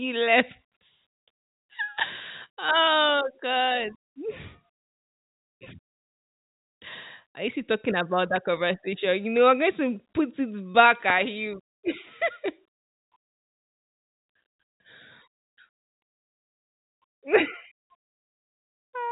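A loud pop occurs twice in quick succession at 8.36–8.56 s, then once more sharply at 11.10–11.12 s, likely a voltage spike from a switch or static, riding over the speech.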